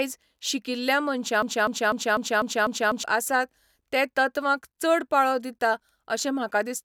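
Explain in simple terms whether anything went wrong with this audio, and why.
Playback most likely stalled at 1.42 seconds and kept resending the last quarter-second it held: a broken-record loop. That fragment repeats exactly six times until 3.04 seconds, stuttering, and the speech meant for that stretch is lost before "आसात ते तत्वांक चड".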